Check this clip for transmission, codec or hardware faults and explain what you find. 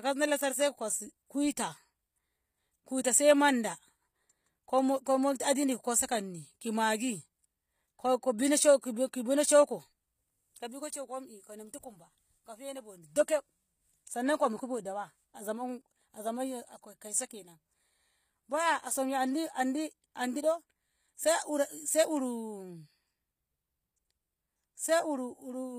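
One codec fault runs through the whole speech clip: HE-AAC compression, likely HE-AAC v2 at a low bitrate consistent with about 24 kbps. The encoder codes only the lower spectrum in full and synthesises the treble by copying lower bands upward under a coarse envelope. The replicated harmonics don't align with the real ones, so sibilants sound gritty, metallic or lispy, and the codec damage is plainly audible. Nothing is present above 15.5 kHz.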